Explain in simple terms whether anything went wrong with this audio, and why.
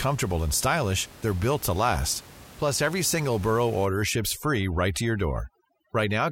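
From 3.85 s to the end, overdone noise removal sets in. The room noise drops and breaks up into twinkling specks. Unlike a plain quiet recording, the speech itself loses its softer parts along with the noise.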